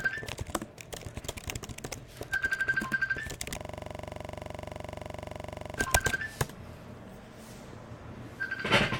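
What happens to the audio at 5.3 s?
At 5.3 s you're inside a system hang loop, from 3.60 to 5.78 s. The system froze and a 42.67 ms chunk, which fits a 2048-sample buffer, repeats about fifty times, giving a rapid stutter at 23.4 Hz.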